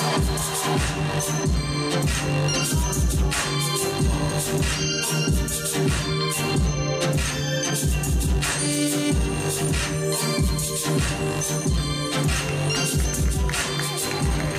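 No technical fault can be heard anywhere in the clip. Nothing in the audio points to a problem along its path.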